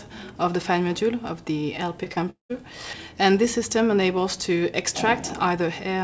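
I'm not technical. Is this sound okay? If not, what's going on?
No. Twice in quick succession, at 2.04 to 2.08 s and again at 2.14 to 2.18 s, the sound briefly smears or wobbles. Each is short concealed packet loss: about 20 milliseconds of the call arrived too late, and the receiver covered the gap by stretching the sound just before it, then blended back in. You never hear silence, only a tiny blur, which is what separates these from the longer break.

That break comes from 2.30 to 2.51 s and is likely a long network dropout, where about a fifth of a second of audio never arrived at all. The sound carries on for a moment as a fading buzz or hiss, then goes quiet for about 130 milliseconds before the audio resumes. Unlike the earlier blips, this one leaves an audible hole, and whatever was in that stretch is gone.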